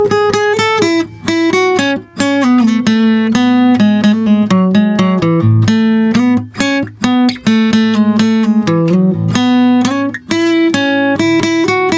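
A music recording, passed through call microphone processing with nothing above 8 kHz, shows gain pumping throughout: the gain ducks by about 15 dB under loud sounds, likely from input gain set far too high feeding a fast limiter. The waveform looks flattened.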